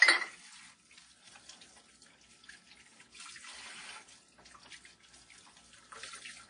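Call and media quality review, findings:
Low-bitrate audio saved at a high bitrate, throughout the whole clip. Symptom: dull, band-limited sound with nothing above 10.1 kHz, plus smeared, swirly detail from an earlier lossy pass. Likely cause: an early low-bitrate encode, fitting WMA at around 32 kbit/s, later re-saved as high-rate MP3. The final encode cannot restore the discarded content. Spectrogram: hard horizontal ceiling at 10.1 kHz, empty above it. Waveform: no visible fault.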